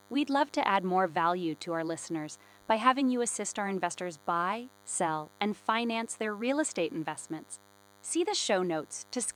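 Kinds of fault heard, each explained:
DECT cordless phone buzz: a thin, steady buzz at 100 Hz with many harmonics, well below the speech, from rectified radio bursts every 10 ms.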